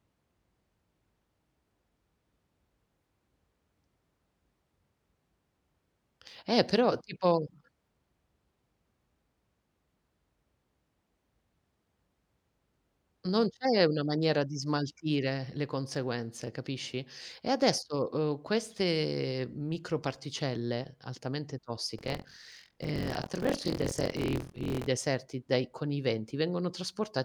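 Buffer tearing runs from 21.97 to 24.89 s, starting after "uhm queste microparticelle altamente" and clearing before "dai con i". The writing and reading positions in the playback buffer have slipped so they cross inside every period, so each period splices fresh speech with roughly 30 percent of audio about 50 ms stale, joined by hard edges. The result is a steady robotic rattle at 43.1 Hz, which fits a 1024-sample buffer, and it sounds only while speech is present.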